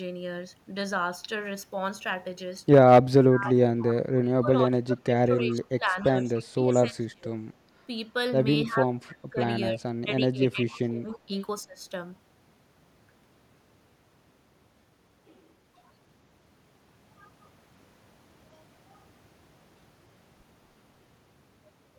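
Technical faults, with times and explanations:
3.2–3.57 s, 4.2–7.3 s, 8.66–8.92 s and 9.3–11.82 s, speech suppressed in double talk: the talker's level sinks by about 15 to 30 dB in patches, for much of the two longer spans. This is likely an echo canceller ducking everything while both ends talk. The speech itself is cut, and no copy is added.
3.81–3.95 s, 5.49–5.56 s, 6.35–6.40 s and 9.10–9.14 s, echo leak: brief, faint repeats of the speech arrive 284 ms late, about 20 to 30 dB below it. This is likely loudspeaker pickup that the far end's canceller failed to remove. Unlike suppression, it adds a delayed copy instead of removing speech.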